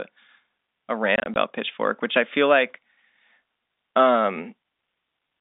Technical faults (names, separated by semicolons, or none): packet loss filled with silence